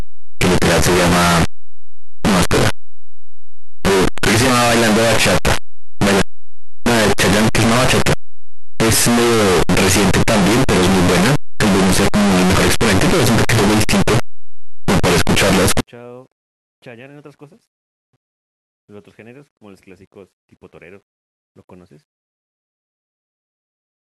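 Signed and unsigned mixed up, from 0 to 15.8 s: the speech becomes very loud, harsh distortion, with soft sounds as loud as strong ones. The likely cause is 8-bit samples read with the wrong sign convention, which flips the top bit so each zero crossing jumps across the full range.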